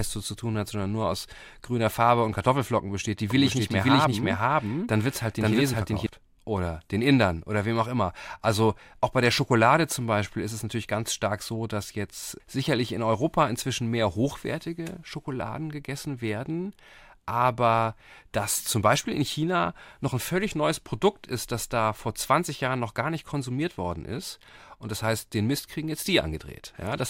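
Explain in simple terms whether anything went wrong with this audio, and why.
A doubled audio track runs from 3.30 to 6.06 s: the speech repeats about half a second behind at about the same loudness, likely captured twice through a slower path.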